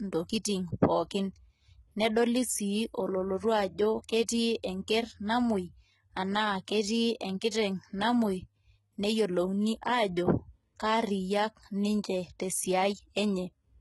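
Throughout, the speech has gritty, metallic sibilants, with the treble rebuilt rather than captured and nothing above 11.8 kHz. This is likely heavy HE-AAC compression, consistent with a bitrate near 16 kbps.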